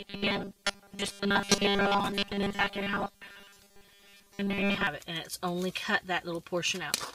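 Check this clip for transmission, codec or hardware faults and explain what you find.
One fault is present: robotic sound from repeated short buffers, from 0.01 to 4.87 s. The sound becomes a rigid metallic buzz at 200 Hz, which fits a 5 ms stretch likely being replayed whenever new audio arrives late, for most of that span. Unlike clean dropouts, the gaps are filled, never silent.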